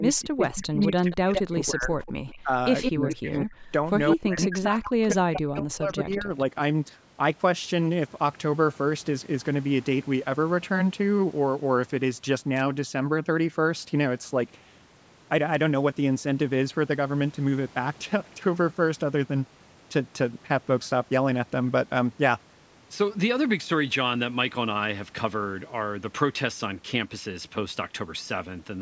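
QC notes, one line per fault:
0.0–6.3 s, speech suppressed in double talk: The speech dips and drops out in pieces, about 4 seconds in all, with the deepest cut about 40 dB down. The likely cause is an echo canceller meeting double talk: with far-end audio playing on the loudspeaker while this side spoke, it could not separate the local talker from the loudspeaker echo and turned both down together.
0.82–3.46 s, 4.1–5.37 s and 6.11–6.4 s, echo leak: A delayed copy of one voice returns under the speech, lagging by 165 ms in the first two stretches and 184 ms in the last. It sits about 5 dB below the speech at first, about 10 dB below in the second stretch and about 25 dB below at the end. This is likely loudspeaker playback that the loudspeaker side's echo canceller did not fully remove and sent back.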